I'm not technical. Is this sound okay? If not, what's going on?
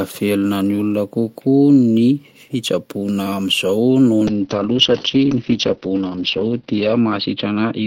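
No. From 4.29 s to the end, a call bitrate drop makes the speech muffled and rough. A weakened connection squeezed it into far less data.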